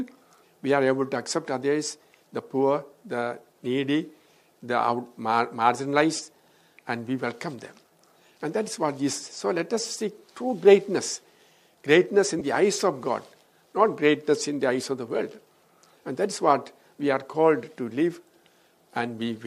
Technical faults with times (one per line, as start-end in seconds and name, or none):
6.17-6.19 lost LE Audio frames
12.39-12.42 lost LE Audio frames